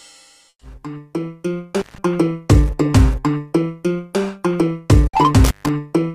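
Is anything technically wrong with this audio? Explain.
Yes, there are two kinds of fault.

Burst of packet loss at 0.49 to 0.63 s and 5.07 to 5.15 s: lost or late packets left gaps of 120 ms and 60 ms. In each, the receiver extended the last sound and faded it, and the first gap fell silent for its final 60 ms. The audio then resumes with that much material skipped.

Intermittent contact at 1.79 to 1.98 s and 5.44 to 5.69 s: a loose connection opened for about 166 ms and 142 ms, so the sound drops out with crackle at each edge.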